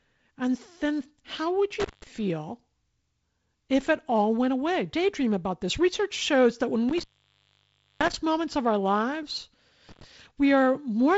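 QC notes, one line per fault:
1.80–2.07 s, 6.89–8.15 s, 9.89–10.04 s, intermittent contact: a loose plug or cable connection breaks and remakes three times. The signal path opens for about 178 ms just after "then how would", for nearly a second after "shows that when" (recovering before "moments of our lives"), and for about 95 ms after "moments of our lives". Each break is bracketed by crackle as the contact scrapes open and shut, and faint hiss remains in the gap.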